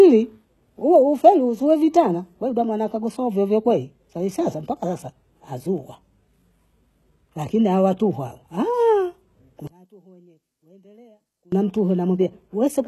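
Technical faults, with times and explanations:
Throughout: HE-AAC compression. The treble has a plainly audible synthetic quality. Its upper bands sound copied up from lower ones, so the s sounds come out gritty and lispy rather than simply dull, and nothing reaches above 12.3 kHz. That pattern, a rebuilt treble whose harmonics don't line up with the speech below, likely comes from spectral band replication at a very low bitrate, around 16 kbps. That sets it apart from a plain low-pass, which would just remove the treble.
9.67 to 11.52 s: one channel inverted. For about 1.85 s the speech drops by about 30 dB, background included, but it doesn't go silent. A faint residue stays audible, then full level returns at 11.52 s. That surviving ghost is what separates this from a dropout or mute. It likely comes from one channel of a stereo source having reversed polarity, so the content common to both channels cancelled when they were summed to mono and only their small difference was left.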